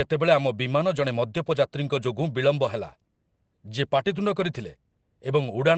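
Speech carried over an Opus call link, with the audio band ending near 8 kHz, shows a lost packet rebuilt from error correction at about 4.35 to 4.45 s. There is no gap, but about 60 ms sounds rougher and noisier, which fits three lost 20 ms packets that the decoder replaced with the low-bitrate redundant copies carried in the packets that followed.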